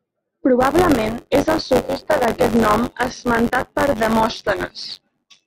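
From about 0.60 s right through to the end, there's buffer tearing. The software filling the ring buffer and the hardware draining it have drifted into each other, so every period has about a tenth of its length replaced by audio from one lap earlier, roughly 20 ms stale, with hard splices at both edges. You hear it as a steady robotic buzz on the speech at 93.8 Hz, which fits a 512-sample buffer.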